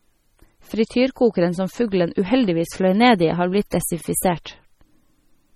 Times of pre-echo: 3.71

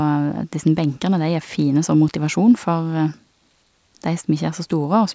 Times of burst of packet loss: none

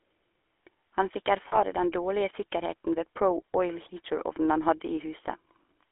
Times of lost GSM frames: 1.48-1.59

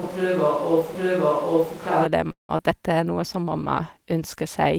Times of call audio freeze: 2.31-2.51

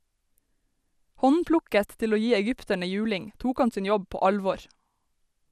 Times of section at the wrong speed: none

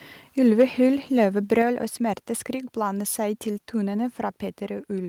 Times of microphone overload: 0.59-0.64, 1.52-1.62

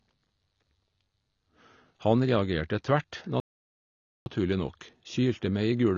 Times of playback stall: 3.40-4.26

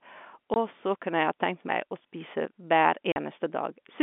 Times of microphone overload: none

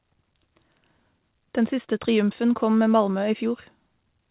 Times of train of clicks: none

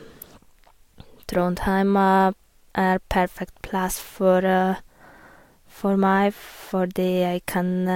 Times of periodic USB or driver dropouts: none

